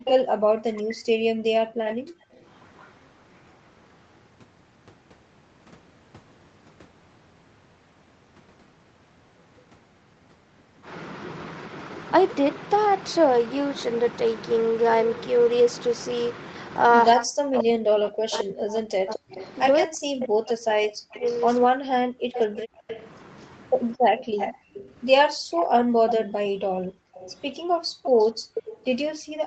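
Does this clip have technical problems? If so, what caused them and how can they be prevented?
Yes. The speech dips hard and breaks up in two stretches, 0.00 to 1.33 s and 17.14 to 24.45 s, falling by roughly 40 dB at its deepest. About a second of the first stretch and about five seconds of the second are affected. This is likely speech suppressed in double talk: both sides spoke at once, and the echo canceller could not tell this talker from the loudspeaker echo, so it pulled everything down. Tuning the canceller for double talk, or using a headset so there is less echo to fight, prevents it.

A delayed, fainter copy of the speech trails behind it in four places. It comes at 0.06 to 0.25 s with a delay of 161 ms at about 5 dB below the speech, and at 1.88 to 2.93 s with 168 ms at about 15 dB down. It returns at 18.35 to 19.52 s with 218 ms at about 20 dB down, and over a long run from 21.15 to 28.79 s with 236 ms at about 10 dB down. 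This is likely an echo leak: the far end plays the call on a loudspeaker, and its echo canceller let part of what its microphone heard go back. Headphones at that end, or a better-converged canceller there, would stop it.

The room sound suddenly drops out from 1.61 to 2.35 s, for about 0.7 s, and again from 23.97 s to the end of the clip, falling by about 38 dB each time. This is background gated by the echo canceller, which clamped the microphone while the loudspeaker played. Gentler suppression settings, or comfort noise to fill the gaps, would keep the background steady.

The audio stops at 8 kHz, which fits the Opus call path at 32 kbps and the call's microphone processing.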